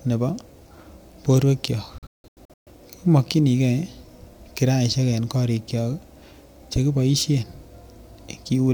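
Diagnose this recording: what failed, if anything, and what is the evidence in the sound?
Digital broadcast dropout at the receiver: after "borwek kyok", speech cuts in short holes from 1.98 to 2.71 s, longest 170 ms, while bad frames are muted.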